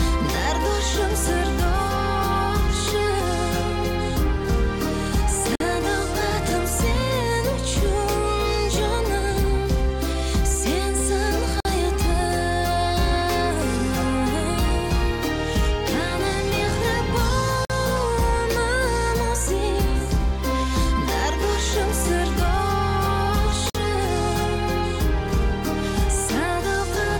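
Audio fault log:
5.55 s, 11.60 s, 17.65 s, 23.70 s: gap between chunks. The audio was delivered in blocks of about 6.0 s, and each join picked up roughly 48 ms of inserted silence instead of running straight into the next block. No material goes missing, but at each of these four points the sound stops abruptly and resumes just as abruptly, giving evenly spaced, hard-edged holes every six seconds.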